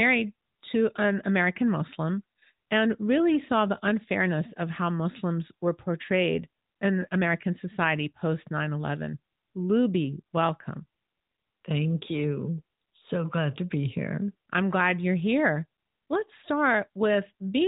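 No technical fault is present in the speech, which carries the band-limited sound of the AMR narrowband mobile codec, with nothing above 4 kHz and only the light coding texture expected of its highest-rate mode, around 12.2 kbps.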